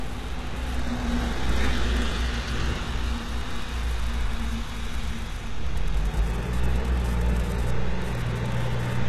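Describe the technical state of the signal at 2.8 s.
HE-AAC compression at 2.8 s, present throughout: the treble appears rebuilt from lower bands and is gritty and metallic, with nothing above 12.3 kHz, likely from a bitrate near 16 kbps.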